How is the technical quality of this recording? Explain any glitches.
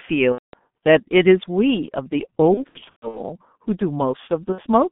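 Poor: the speech has been through a heavily degraded low-rate telephony chain and has three audible dropouts.

G.723.1 codec, throughout the clip: the speech was squeezed through G.723.1, and the coarseness points to its roughly 6.3 kbit/s mode. The line band runs only from about 150 Hz to 3.5 kHz. The codec rebuilds the voice in 30 ms blocks from a slowly updated model, so the damage is heavy. The speech sounds muffled and hoarse, with smeared consonants.

VoIP packet loss concealed by the speech codec, at 0.32–0.56 s, 2.54–3.21 s and 4.52–4.63 s: packets went missing, and the decoder filled each gap by repeating its last pitch and filter while fading the level. The first gap spans about 210 ms of lost audio. The second has roughly 330 ms of losses scattered across about 600 ms, with runs up to 120 ms. The last is a brief 60 ms. Each gap turns into a fading buzzy tone or coloured noise, and the speech stays weak for a moment after it resumes.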